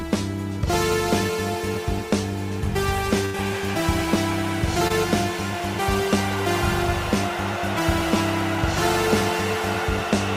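At 3.25 to 3.36 s there's a burst of packet loss: roughly 80 ms of the stream never arrived in time, so the receiver stretched the last bit of sound it had, easing it down over that stretch, then jumped ahead with that chunk simply gone.

Then at 4.88 to 4.92 s comes a short concealed packet loss, about 20 ms dropped. The decoder patched the hole by extending what came just before and blending back in, which leaves a quick smear or wobble rather than an audible gap.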